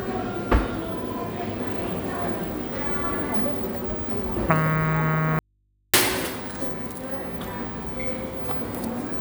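At 5.39 s the sound drops out abruptly and doesn't return until 5.94 s, a gap of roughly 0.55 s. It's an audio dropout to a faint residue: the signal vanishes mid-flow with no fade, and what's left is a low mains hum sitting somewhere around 40 dB below the normal level. The likely cause is the source briefly disconnecting while the input stayed live, so the open input picked up hum until the signal came back.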